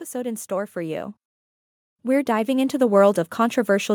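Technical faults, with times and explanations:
0.11–1.20 s and 2.02 s to the end, automatic gain rising: the level control judged the input too quiet and ramped its gain up, so speech and background swell together by about 4 dB, then about 5 dB.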